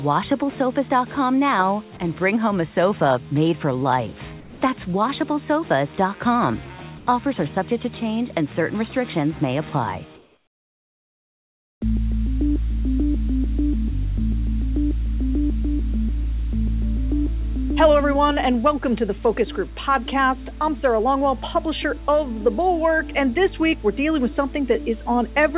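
At 1.97 to 2.0 s, about 20 ms of sound vanishes into a brief patch of flat noise. This is sound dropped by the voice detector, most likely because the sender's detector briefly judged the material to be background, stopped transmitting, and left the receiver to fill the 30 ms gap with synthetic noise. On a spectrogram, the sound's structure breaks off for a thin vertical strip of even, textureless hiss. The waveform shows a small notch before the signal resumes.

Comfort noise in place of the background appears three times. At 4.4 to 4.61 s and 6.98 to 7.07 s, the background, sitting about 20 dB below the loudest passages, turns smooth and drops about 4 dB. At 10.16 to 11.81 s, a background about 31 dB down is replaced for 1.65 s by noise about 10 dB quieter. The likely cause is discontinuous transmission: during pauses the sender stops sending real audio, and the receiver synthesises a rough spectral stand-in. 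On a spectrogram, each span shows the background's detail giving way to a uniform, darker band. In the waveform, the noise floor steps down and becomes even until the sound returns. Throughout, nothing reaches above 4 kHz, which fits a narrowband G.711 A-law call path at 64 kbps.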